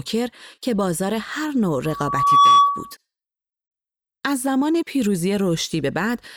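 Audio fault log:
1.85–2.95 s, loudspeaker feedback squeal. A single steady tone at 1.1 kHz rises out of the speech. It swells over roughly half a second and then sits around 10 dB above the talker for the rest of its run. The microphone is hearing its own loudspeaker. At 1.1 kHz the loop gain passes unity, so that frequency keeps feeding itself and grows into a howl until it stops at 2.95 s.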